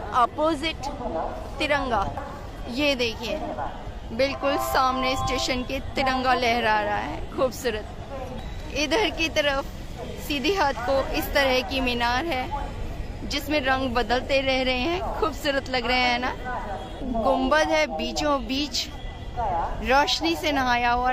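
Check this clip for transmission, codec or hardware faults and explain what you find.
No faults can be heard.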